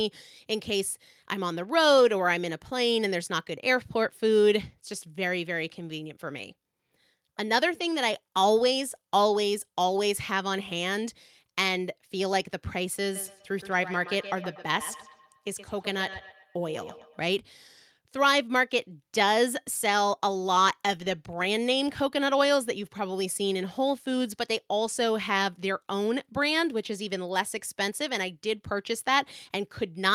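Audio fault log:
13.15–17.3 s, feedback echo between two devices: the speech returns roughly every tenth of a second, thinner and ringing, peaking at about 15 dB below the talker. A second device in the room replays this microphone's signal, which is picked up again, and neither echo canceller removes the other's output.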